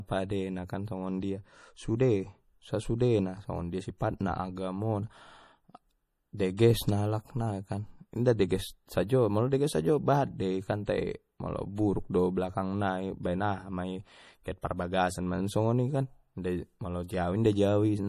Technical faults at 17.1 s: MP3 compression; pre-echo

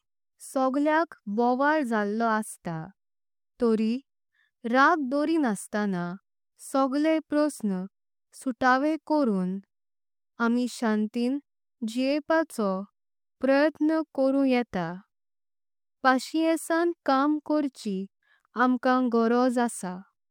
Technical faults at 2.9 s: none

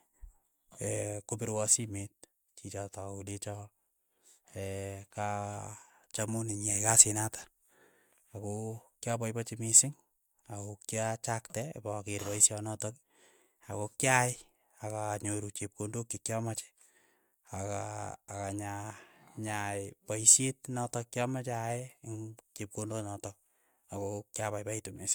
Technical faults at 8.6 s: none

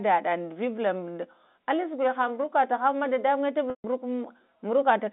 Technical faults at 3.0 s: none

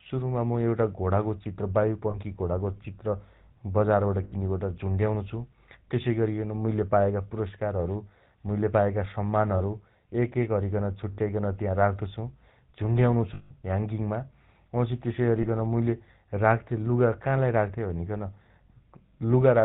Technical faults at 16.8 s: GSM full-rate codec

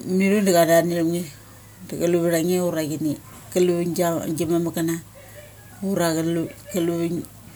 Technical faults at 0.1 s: none

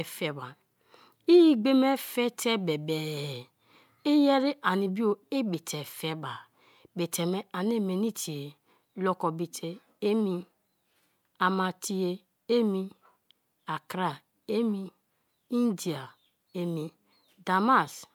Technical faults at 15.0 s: none

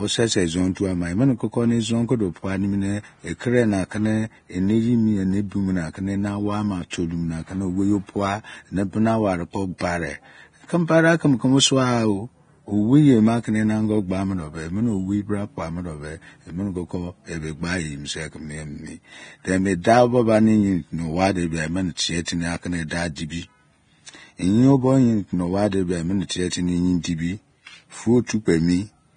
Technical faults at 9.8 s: Vorbis compression; pre-echo

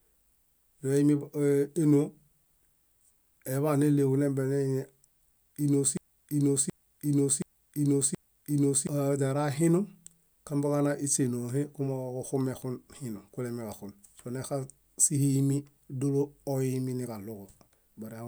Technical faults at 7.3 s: broken-record loop

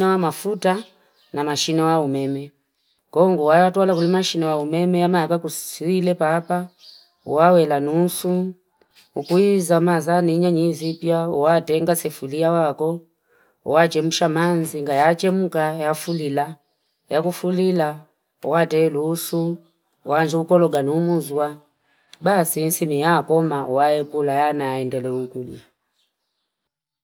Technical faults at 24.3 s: none

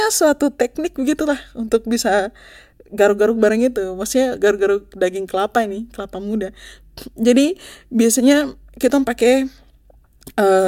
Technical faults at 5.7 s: none

